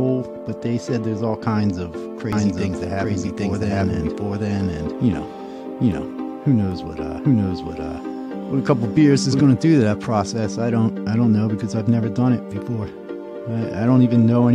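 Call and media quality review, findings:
Doubled audio track, 2.33–9.45 s: equal-level copy about 0.7 s behind, abrupt on/off. No decay or room colour, unlike echo. Likely second, slower capture path mixed in.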